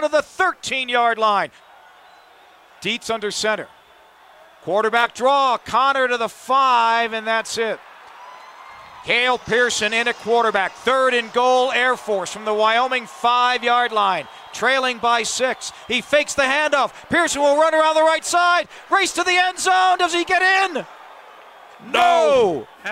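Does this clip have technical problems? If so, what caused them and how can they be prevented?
No, there are no technical problems to report here.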